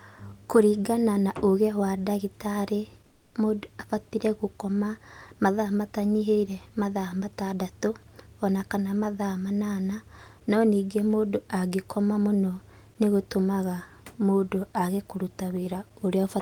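From 3.07 to 3.33 s, comfort noise replaces the background, likely via Opus DTX: a steady hiss about 7 dB quieter, textureless on a spectrogram.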